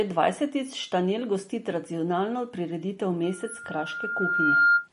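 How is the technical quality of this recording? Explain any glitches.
The recording has two clear problems: plainly audible lossy-coding damage throughout, and a feedback squeal near the end.

Throughout, the audio has no content above 10.6 kHz and a watery, swirling texture on the speech, which points to MP3 compression, likely at a low bitrate of around 40 kbps. Short of bits, the encoder cuts the treble at a fixed frequency and drops weak spectral lines that flicker from frame to frame.

From 3.23 s to 4.88 s there is a loudspeaker feedback squeal: a steady 1.4 kHz tone that swells over roughly a second and a half and ends about 10 dB above the speech. The microphone picked up the speaker it fed, and loop gain exceeded unity at that frequency.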